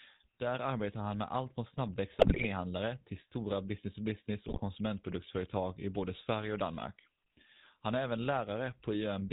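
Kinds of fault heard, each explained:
GSM full-rate codec: The whole clip has passed through the original GSM full-rate speech codec. It models the vocal tract as a filter and drives it with a sparse train of regularly spaced pulses, keeping only one excitation sample in three. Nothing above 4 kHz gets through, so the speech sounds narrow and dull. The damage is plainly audible. A buzzy, gravelly roughness sits on the voice. The quality fits a bitrate of about 13 kbps.
GSM bit errors: Flipped bits reach the speech decoder, so some frames are rebuilt from wrong filter, pitch or gain values. Each corrupted frame bends the spectrum or jumps in level. Two bursts are heard, from 2.19 to 2.46 s and from 4.48 to 4.61 s. In both, the speech breaks into squawks, pops and gargling. The first burst is longer, fitting a dozen or so damaged frames. The second fits about seven.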